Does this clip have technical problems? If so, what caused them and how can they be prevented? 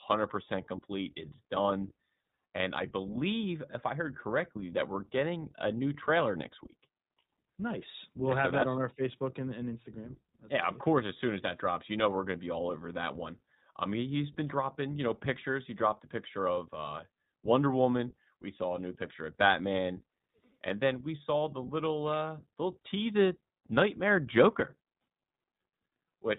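Yes. Throughout, the speech went through the iLBC codec, which fits its 15.2 kbps, 20 ms frame mode. It removes everything above 4 kHz, leaving speech plainly rough and synthetic. Prevent this by sending or recording with a wideband codec at a higher bitrate instead of narrowband iLBC.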